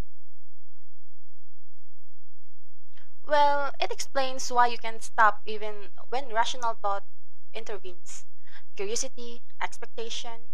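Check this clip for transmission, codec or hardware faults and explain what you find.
There is one fault, a DC offset present throughout the speech. The whole waveform sits shifted from zero by a constant of about -19 dBFS, wasting headroom. It is inaudible, but the waveform rides visibly off-centre and a spectrogram shows a steady band at 0 Hz.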